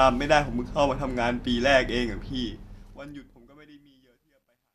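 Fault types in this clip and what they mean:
Truncation distortion on a fade: the undithered fade-out, consistent with a 12-bit stage, breaks into staircase waveform steps and speckled spectrogram grit, worst from 3.52 s.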